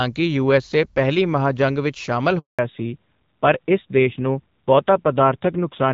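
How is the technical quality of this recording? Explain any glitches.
The recording has two linked faults partway through the call. The first 2.4 s carries clear HD Voice speech, with only light codec colouring.

At 2.39 s, right after "ਜੰਗ ਵਿਚ ਸ਼ਾਮਲ", a handover gap cuts the speech for 200 ms. No frames arrived while the call switched networks, so there is silence.

From 2.59 s to the end, there is a fallback to narrowband. Nothing above 4 kHz remains. The speech sounds duller and rougher, which fits a low-rate AMR narrowband codec.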